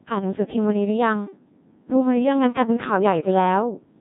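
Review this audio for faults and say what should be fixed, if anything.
Throughout, the speech carries the Codec 2 vocoder's robotic, buzzy quality with heavy damage, which fits a very low rate around 1.6 kbit/s. Only pitch, voicing, energy and a spectral envelope survive, and the voice is rebuilt from sine waves. A spectrogram shows rigid, evenly spaced harmonic combs with smeared formants and no natural noise texture. To prevent this, record or transmit with a higher-rate waveform codec, or use Codec 2's top rate if the channel allows.

From 0.42 to 0.56 s, bit errors on digital voice radio corrupt a few vocoder frames, with errors hitting something like one bit in twenty. The pitch, level and tone colour jump abruptly into a warbling bleep. On a spectrogram this appears as a short block where the harmonic spacing and energy change in frame-sized steps. On a waveform it appears as a sudden change of amplitude. 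To prevent this, improve signal strength or add stronger error protection on the radio link.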